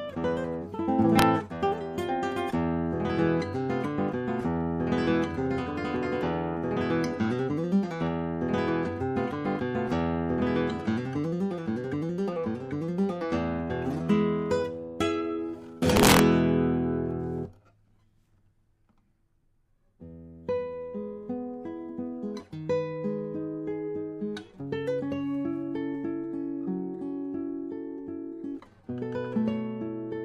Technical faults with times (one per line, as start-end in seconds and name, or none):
1.19-1.22 integer overflow
15.97-16.19 integer overflow